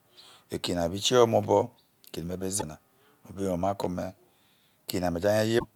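Damaged data in a compressed stream breaks the speech twice: corrupted frames make the decoder misread the bytes and lose sync until it finds a valid frame header. That comes through as a brief chirp, squawk, click or short hole from 2.58 to 2.63 s and again from 5.55 to 5.65 s.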